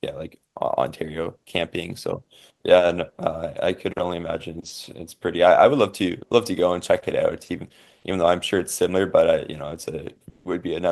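Right near the end, from 10.29 to 10.45 s, about 160 ms of the real background gives way to comfort noise: a flat, featureless hiss roughly 6 dB quieter. That points to likely discontinuous transmission, something like Opus DTX, with the receiver filling the pause with synthetic noise.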